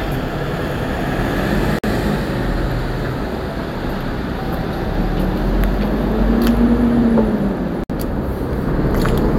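At 1.79 s the sound drops out for about 50 ms, and at 7.84 s it drops out again for about 60 ms, ending at 7.90 s. The edges of each silence are smeared, and the audio resumes exactly where it left off. These are gaps at a join of encoded pieces. The audio was encoded in chunks about 6 s long and joined without trimming, so each encoder's start-up delay and final-frame padding stay in as silence.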